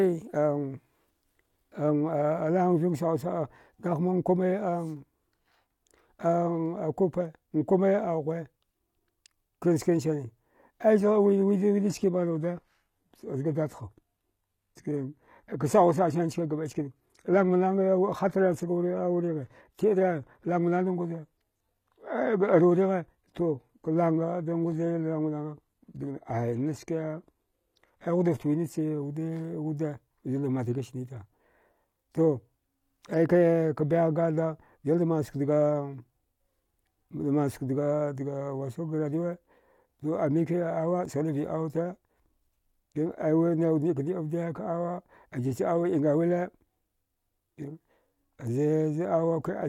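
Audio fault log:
11.0 to 29.0 s, adaptive stream at a lower bitrate: the speech suddenly loses its top end, with nothing above 14.9 kHz, and codec artefacts thicken, then quality snaps back at 29.0 s. There's no gap at either edge. That's the player dropping to a cheaper rendition when the connection slowed and climbing back once it recovered. The sound points to a low-rate HE-AAC version, around 20 kbit/s, standing in for a fuller AAC stream near 96 kbit/s.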